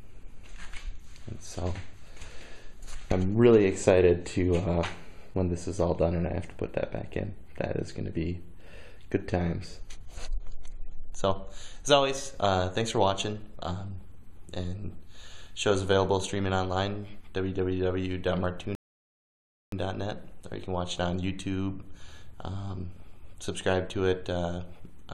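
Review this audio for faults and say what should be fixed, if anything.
At 18.75 s the sound drops into silence for nearly a second, then picks up at 19.72 s exactly where it broke off. This is a rebuffering stall: playback drained its downloaded audio and paused for more, adding about 0.97 s without losing any material. Larger startup buffering or adaptive bitrate switching would prevent it.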